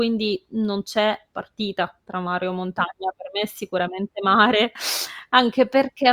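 No technical faults are audible in this speech recording.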